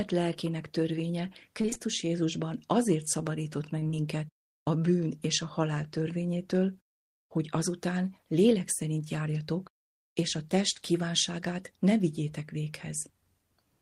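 Repeated packet loss (robotic sound) hits this speech clip at 1.61–1.82 s, after "lelkének törvénye", and 3.80–3.95 s, after "azért szabadított meg". Short gaps, the longest about 20 ms, are patched by extending the last sound, leaving half of each stretch concealed and the audio choppy.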